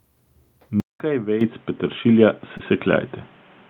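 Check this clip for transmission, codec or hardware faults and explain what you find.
Two kinds of fault are present. There are two microphone volume steps and one short concealed packet loss.

The microphone volume stepped up at 1.41 s and again at 2.43 s. The first jump is about 10 dB. The second is about 4 dB. Each time, the call software judged the input too quiet and raised the device gain in a single step. Speech and background get louder together, abruptly.

A short concealed packet loss occurs from 2.57 to 2.61 s. About 20 ms of audio failed to reach the decoder in time. The receiver bridged the gap with 20 ms of synthesized continuation, extending the preceding sound, then blended back into the real signal. It is heard as a brief smear or wobble just after the second volume step.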